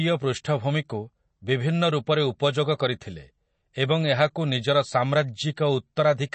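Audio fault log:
throughout: MP3 compression. The speech has no content above 8.3 kHz and plainly audible watery, swirling artefacts, likely from an MP3 encoder starved of bits, which fits about 32 kbps. It cut the treble and zeroed weak frequency lines that flicker between frames.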